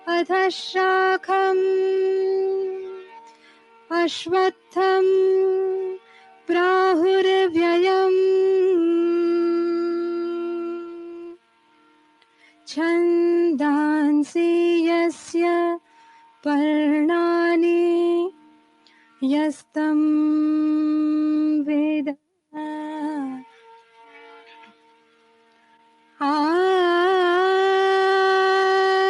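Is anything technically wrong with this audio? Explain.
Yes. A noise suppressor meant for speech was left running on material that isn't speech, and it misreads sustained sound as noise. Throughout the clip its gain rides up and down by roughly 10 dB. Onsets get through, but held tones, ambience and decays are pulled down, so the sound pumps and thins. On a waveform the envelope swells at each attack and then sags. On a spectrogram, steady partials and reverb tails fade early and look patchy.

The suppressor cuts deepest, by about 12 dB, at 2.79–3.9 s, 4.52–4.76 s, 5.99–6.49 s, 10.63–12.67 s, 15.8–16.45 s, 18.32–19.22 s, 23.43–24.19 s (about 10 dB there) and 24.39–26.2 s. In these spans its noise estimate catches up with sound that has held steady, so it treats that sound as background and attenuates it. You hear a sinking or hollowed level and decays cut short. The waveform shows the level pressed down across each span, and the spectrogram shows darker, gappy bands there.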